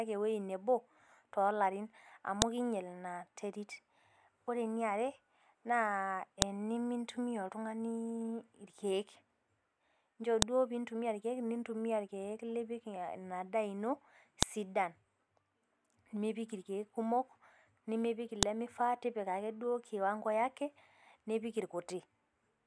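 Speech with a file header played as audio. Sharp, loud clicks land at 2.42, 6.42, 10.42, 14.43 and 18.43 s. They repeat every 4 s, regardless of the talking. Joined 4 s pieces kept their WAV headers, and those bytes play as samples.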